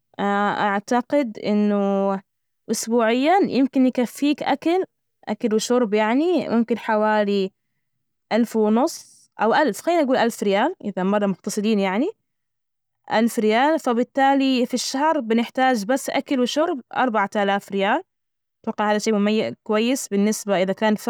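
No technical faults can be heard anywhere in this speech recording. There is nothing to point to at any moment in the audio.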